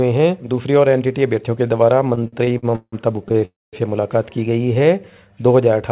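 The audio comes through a narrowband call path, with nothing above 4 kHz, which fits a G.711 mu-law link, and it has three timing faults. From 2.15 to 3.45 s there are repeated stalls (stutter): the playback keeps catching on itself, fourteen short hangs where the receiver held onto the last bit of sound because packets were arriving late or too slowly for its jitter buffer. The longest hang is 169 ms, and together they pad out about 0.4 s, close to a third of that stretch. Nothing actually goes missing; the sound just drags and hiccups. Right after, from 3.45 to 3.76 s, comes a call audio freeze. The last sound hangs on and fades out into roughly 0.21 s of silence, then the audio picks up exactly where it stopped. That's most likely packets held up in transit long enough for the jitter buffer to run dry. The receiver filled about 0.28 s in total, so the gap is inserted rather than anything being dropped. 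Later, from 4.58 to 4.83 s, there's a jitter buffer slow-down. The buffer was topping up its reserve by repeating tiny pitch-period slices, adding 40 ms to that quarter-second, so it plays at about 87% speed. The pitch holds, but the sound gets drawn out.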